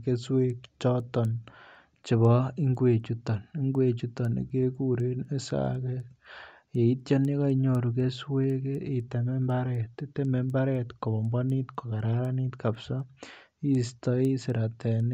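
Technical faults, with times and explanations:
Throughout, resampler restarted on every block: the rate converter processed each 250 ms block on its own, apparently converting 16 kHz material up to 48 kHz, so its filter lacked the true neighbouring samples at every block edge and filled in silence or the wrong end of the block. Each boundary therefore carries a small discontinuity, heard as a regular tick four times per second that rides on the speech and vanishes in pauses.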